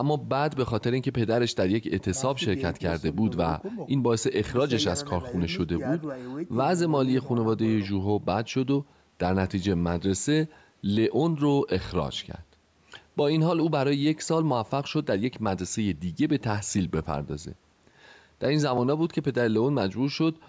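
Listening to the speech, nothing stood out as a technical fault, and the only trace of the call microphone processing is the usual trimming of the lowest bass with nothing above 8 kHz.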